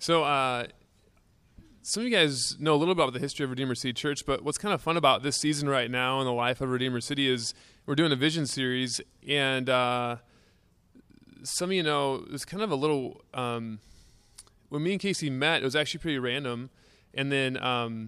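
No faults can be heard anywhere in this speech recording.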